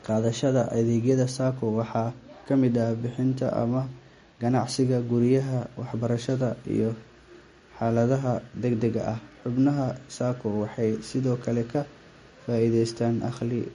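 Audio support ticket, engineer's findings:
Speech, entire clip: watery, swirly texture, metallic chirps on s sounds, no content above 10.6 kHz. Likely MP3 compression. Encoder short of bits, cutting treble at a fixed point and switching weak frequency lines on and off between frames. Fits roughly 40 kbps.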